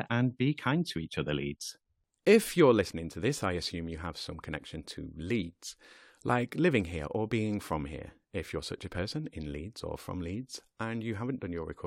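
No technical faults can be heard anywhere in the recording.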